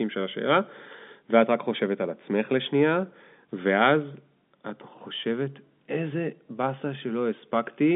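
Nothing stood out on listening to this telephone-band speech, which sits within the usual line range of roughly 200 Hz to 3.6 kHz.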